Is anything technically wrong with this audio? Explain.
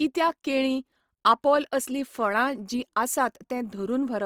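Yes. Opus compression runs throughout the speech, plainly audible as a grainy, rough texture. The likely cause is Opus music mode at a rate fitting about 24 kbps, with starved bands refilled with noise. A spectrogram shows few holes up to 20.2 kHz, but speckled upper harmonics.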